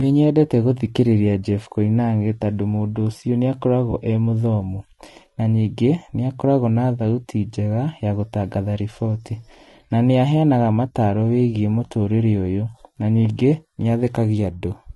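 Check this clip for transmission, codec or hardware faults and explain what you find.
Two faults are audible: coding damage across the whole clip, and one brief dropout patch early on.

Throughout, the speech sounds rough and grainy. This is likely low-delay AAC compression at a low bitrate. Too few bits are spread over its spectrum lines, so a spectrogram shows noise filling the gaps between harmonics and a thin, synthetic-looking top band.

From 3.91 to 3.94 s, between "tondũ mũndũ ũcio nĩ" and "e mũthomu na ningĩ", there is AAC frame loss with concealment. The decoder filled about 20 ms, which fits one lost frame. It sounds like a smeared, noisy blip and appears as a blurred vertical slice.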